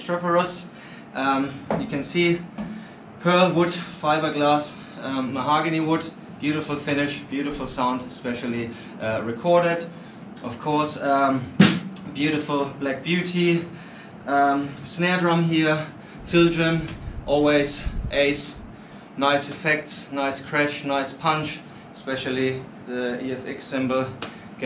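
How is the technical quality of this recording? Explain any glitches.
No technical glitches can be heard anywhere in the recording; the signal stays continuous and stable throughout.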